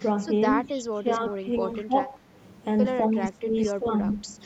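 At 0.67 to 0.82 s a faint echo leak appears: a copy of the speech trailing by 203 ms and about 25 dB below it, likely loudspeaker pickup that the far side's echo canceller failed to remove. It returns at 4.09 to 4.13 s, slightly stronger at about 20 dB down. On a spectrogram it shows as a weak ghost of the preceding harmonic pattern, shifted right by roughly a fifth of a second.

From 0.93 to 1.5 s the speech dips sharply, up to about 15 dB, which points to speech suppressed in double talk, likely an echo canceller that ducked this talker while the other side was speaking. The same gating recurs at 1.82 to 2.21 s, 3.11 to 3.56 s, 3.73 to 4.06 s (shallower dips of about 10 dB in the second and fourth), and briefly at 4.24 s. The waveform envelope shows chopped, sudden troughs.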